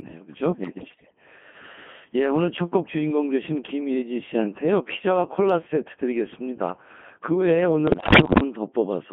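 Speech squeezed through a Codec 2 vocoder transmits only pitch, voicing, energy and a coarse spectral envelope per frame, with a rate that fits the 2.4 kbit/s mode. The decoder rebuilds the voice from sine waves, so the whole clip sounds robotic and buzzy, held within roughly 150 Hz to 3.4 kHz. Bit errors on digital voice radio strike from 0.63 to 1.16 s and again from 7.88 to 8.40 s, with around one bit in ten flipped. Each corrupted frame gets wrong pitch, level and spectral values, so the synthetic voice lurches in pitch and loudness and breaks into warbling, bleeping gibberish.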